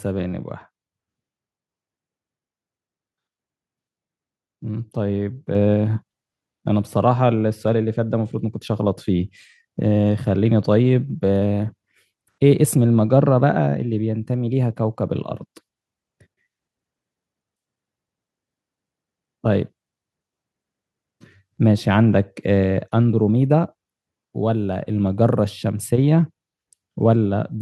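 At 5.55 s there's a clean microphone volume step up: the call software decided the mic was running too quiet and bumped the device's input volume by about 5 dB in a single jump. You hear it as the speech and the room noise behind it getting louder at the same instant, with no fade. Because the background lifts right along with the talker, it's clearly a gain change rather than someone raising their voice.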